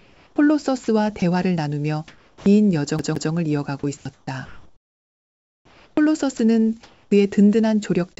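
Sound chopped by the voice detector runs from 0.0 to 1.22 s and again from 3.79 to 7.11 s, heard through a wideband call path whose content stops at 8 kHz. The quiet edges and softer stretches drop out and are filled with a flat hiss, about 0.44 s in the first span and about 2.1 s in the second. The result is a stuttering on-off texture, likely because the sender's voice detector kept toggling transmission. This differs from packet loss concealment: the gaps are filled with steady noise rather than smeared or repeated audio, and the cuts follow the level of the sound rather than falling at random. From 2.08 to 2.46 s, comfort noise stands in for the background. For those 0.38 s the detailed ambience, sitting about 35 dB under the loud parts, gives way to a featureless hiss about 6 dB quieter, likely because transmission paused and the receiver generated stand-in noise. A plain level drop would keep the background's texture; here the texture itself disappears. 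At its tail, from 2.38 to 2.46 s, comes an onset clipped by the voice detector. The returning sound loses its first 80 ms and jumps in abruptly, likely because the detector reacted late. Unlike a fade-in or a gate with a soft attack, there is no ramp at all: hiss, then sound at full level. CD stuck on one turn occupies 2.99 to 3.32 s. A slice of about 0.17 s plays twice in a row with a brief mute at each jump back, the quick, even stutter of a laser thrown back one track by a scratch. What sets it apart from a network glitch repeating a packet is the fixed loop length and the clean mute at every restart, rather than a single smeared repeat.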